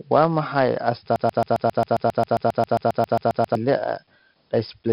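4-bit ADPCM compression runs through the whole clip. Each sample is coded as a coarse 4-bit step from a predicted value, with the step size adapting as the speech rises and falls. The damage is heavy: a gritty hiss rides on every loud syllable and tracks its level, and sharp onsets crunch where the step cannot grow quickly enough. Nothing reaches above 5.3 kHz, so the speech also sounds dull, which points to a low sample rate; the data rate is roughly 44 kbps.

A broken-record loop runs from 1.16 to 3.55 s. A 134 ms fragment of the speech repeats exactly, back to back, about 18 times, giving a stuttering, mechanical chatter in place of continuous talk. The likely cause is a player, encoder or stream that stalled and kept resending the last fragment it held. The speech that should have filled those 2.4 seconds is lost.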